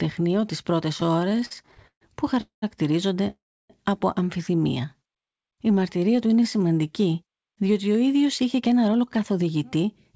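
From 0.98 to 2.03 s the speech shows repeated stalls (stutter): packets reached the receiver late or more slowly than they were played out, so the jitter buffer emptied again and again. Across 19 separate gaps the receiver stretched the last sound to cover the holes, filling 353 ms in total, about a third of that stretch, with the longest hold lasting 138 ms. Nothing is lost, but the speech drags and stammers as it keeps catching and restarting.

Two call audio freezes follow, at 2.41 to 2.64 s and 3.30 to 3.72 s, the second ending just before "από αμφιθυμία". In each, the last sound carries on as a fading buzz and then drops to silence, for 130 ms in the first and 310 ms in the second, before the speech resumes exactly where it stopped. The cause is likely packets held up in transit, which drained the buffer and inserted gaps of 210 ms and 393 ms into the timeline.

After "από αμφιθυμία", from 4.97 to 6.68 s, a jitter buffer slow-down runs the speech at about 90% speed while keeping its pitch. 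To rebuild a depleted reserve, the receiver repeated single pitch periods and fragments of pauses many times over, adding 173 ms. Syllables sound drawn out.

After "διότι ο", from 8.25 to 9.84 s, a jitter buffer speed-up does the reverse. With excess audio queued, the receiver cut out short slices one or a few pitch periods long, around 150 ms in all, so the speech runs at about 108% speed at unchanged pitch and sounds hurried. Throughout, the bandwidth stops at 8 kHz, which fits a G.722 call codec.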